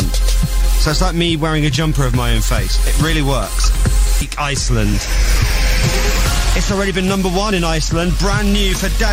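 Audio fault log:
4.21–4.34 s, skip ahead: Playback suddenly jumps forward here, with roughly a second of audio just gone. Nothing fills the hole, so the material before and after gets butted right up against each other. That points to a chunk lost in transit or thrown out by an overflowing jitter buffer while newer audio was already queued. The receiver simply carried on from the newest audio, which is why you get an abrupt splice instead of a silence.
6.75–9.12 s, jitter buffer speed-up: From here to the end the sound runs about 4% fast, yet the pitch stays put. The jitter buffer was holding more audio than it wanted, so it kept trimming out tiny slices a pitch period or so long, over and over, to claw the delay back. Altogether that shaves off around a tenth of a second.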